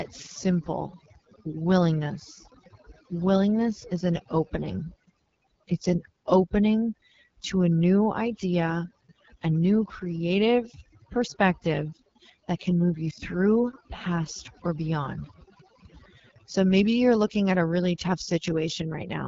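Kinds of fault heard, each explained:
Overdone noise removal: an over-strong noise reducer drops bands near its noise estimate, leaving near-silent gaps with twinkling specks; spectrograms show scattered isolated dots.
AMR wideband (HD Voice) codec: speech sounds rough and raspy, fitting a low rate near 8.85 kbit/s; the spectrogram shows a hard ceiling with nothing above 7.4 kHz.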